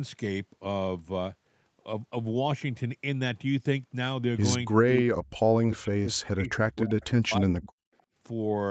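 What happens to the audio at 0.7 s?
At 0.7 s the speech carries on intact with no fault, heard through the call's band limit that leaves nothing above 8 kHz.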